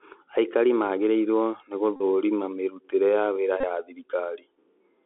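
Speech heard through a Bluetooth CVSD headset codec: everything is confined to roughly 300 Hz–3.5 kHz, with scratchy s sounds and a granular hiss that set it apart from a simple low-pass filter. Bluetooth headset packet repeats occur at 1.96–2.02 s and 3.60–3.65 s. Each is a short, even buzz near 267 Hz from the same 3.75 ms packet being replayed, not a silent gap or click.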